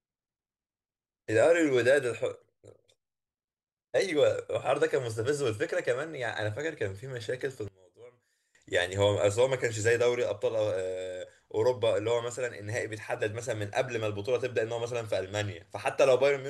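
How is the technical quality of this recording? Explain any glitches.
There's one real glitch here, a short dropout in the speech running from about 7.68 to 8.55 s. For a bit under a second the voice sinks by about 24 dB and goes faint. That's the signature of one channel inverted: when one side of the stereo pair flips polarity and the two get summed to mono, the centred voice cancels almost completely, and only the small difference between the channels survives. That's likely what happened here.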